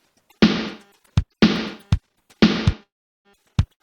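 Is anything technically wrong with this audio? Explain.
Yes, there are two playback interruptions near the end.

Call audio freeze, 2.83 to 3.28 s: the sound stops and the last fragment is carried on as a brief fading buzz, then about 370 ms of near silence before the audio resumes where it left off. The likely cause is packets held up in transit, draining the jitter buffer. Roughly 414 ms was filled in, nothing was lost, and everything after arrives 414 ms late.

Short stall from a late packet, 3.73 to 3.82 s: one packet missed its slot, so the receiver stretched the preceding sound for 72 ms until it showed up. Playback then continued from the same point with nothing dropped. This is heard as a sound held slightly too long with a faint buzzy dip, and it pushes later audio back by a further 72 ms.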